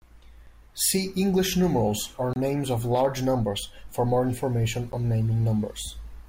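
At 0.47 s, a 5 ms block of digital silence cuts into the speech, heard as a sharp tick. At 2.33 to 2.36 s, a longer 26 ms block leaves a brief audible hole. At 4.92 s, a 10 ms block gives a small pop. In each case the sound cuts out abruptly with no fade. The waveform shows a flat line, and the spectrogram shows a blank vertical gap bordered by thin broadband streaks at the edges.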